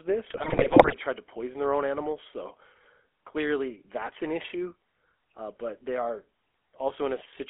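The whole clip has the GSM full-rate codec's gravelly buzz, squeezed into a 300 Hz to 3.4 kHz band, which fits the old 13 kbps coder.

From 0.3 to 0.95 s, just before "tried to poison their", GSM bit errors corrupt the decoder's parameters, so the speech squawks and gargles in sudden level jumps.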